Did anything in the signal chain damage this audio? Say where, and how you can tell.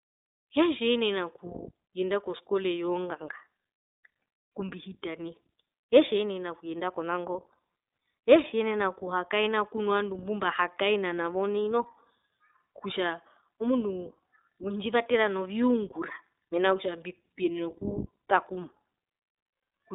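Yes, at the codec stage: iLBC codec damage throughout. The speech stops below 3.7 kHz and sounds plainly rough and synthetic, which fits independently coded 20 ms frames at 15.2 kbps.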